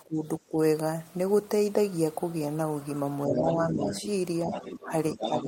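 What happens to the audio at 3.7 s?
Speech suppressed in double talk runs from 3.27 to 3.93 s: the talker's level sinks by a few decibels, about 5 dB at its deepest. This is likely an echo canceller mistaking simultaneous talk for loudspeaker echo and turning everything down.

The other side's voice leaking through overlaps it, from 3.32 to 4.06 s, as a second, fainter voice only a little below the talker, around 5 dB under. This likely comes from residual loudspeaker echo that cancellation failed to remove from the microphone.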